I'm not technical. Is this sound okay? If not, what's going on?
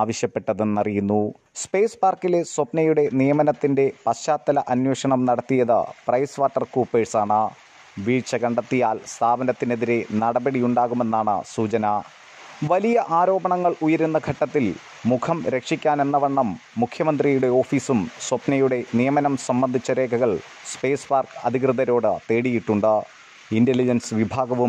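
Yes, no faults to report.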